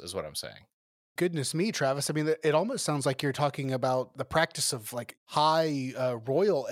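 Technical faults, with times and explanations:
No technical fault can be heard anywhere in this speech clip. There is nothing to mark with a time or explain.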